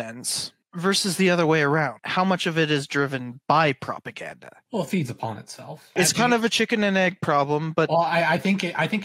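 No technical faults are audible anywhere in the clip.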